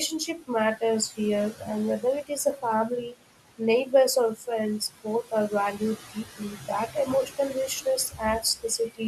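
Noise suppressor artifacts run through the whole clip: the suppressor pulls the room noise, which sits about 14 dB below the speech, down by about 17 dB in the gaps, then lets it swell back under each phrase.

Speech cut by the noise suppressor occurs at 0.27 to 0.82 s, 1.53 to 1.68 s, 2.0 to 3.18 s, 3.58 to 3.93 s and 4.8 to 9.01 s. The suppressor mistakes quiet speech for noise and turns it down by as much as about 19 dB, so soft consonants and word endings sound swallowed. Each early span loses only brief moments, while the final span loses around a second in total.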